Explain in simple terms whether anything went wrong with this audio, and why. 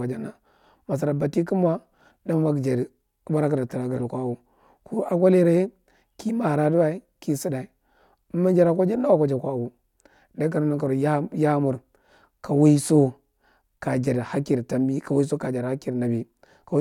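Nothing went wrong here; the speech comes through steadily all the way, with no glitches, gaps or odd sounds to point to.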